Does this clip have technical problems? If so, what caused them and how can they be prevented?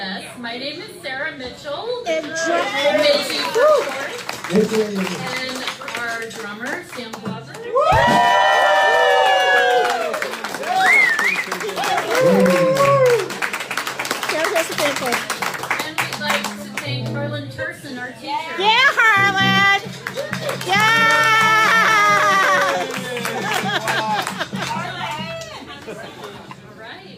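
No, nothing technical stands out anywhere in this clip, so there's no problem to trace back or guard against.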